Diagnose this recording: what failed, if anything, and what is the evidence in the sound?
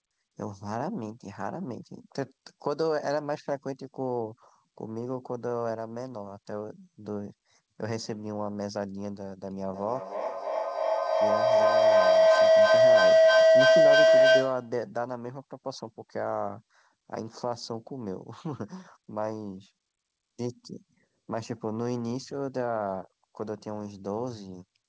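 Feedback howl, a microphone-to-loudspeaker loop in the call path, from 9.74 to 14.81 s. A tone near 700 Hz builds to about 12 dB above the speech, pulsing roughly every 300 ms at the loop delay. Each trip adds gain until the loop breaks.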